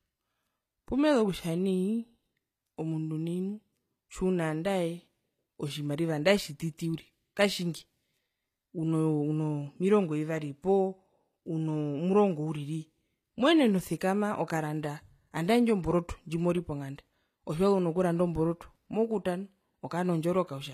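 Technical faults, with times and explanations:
Throughout, HE-AAC compression: s sounds are plainly gritty and lispy and the treble sounds synthetic, likely from spectral band replication copying lower bands upward, which fits a roughly 24 kbps encode. A spectrogram would show blocky, repeated upper bands ending sharply near 14.9 kHz.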